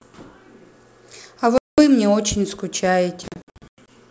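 Packet loss on an ADPCM call hits this G.722 wideband speech recording twice. From 1.58 to 1.82 s, 200 ms drops to hard-edged silence, which suggests roughly ten lost packets. From 3.28 to 3.90 s, 340 ms vanishes in scattered holes up to 100 ms long. Each time, the decoder's predictor and step size drift from the sender's, so the speech returns with brief, slight distortion.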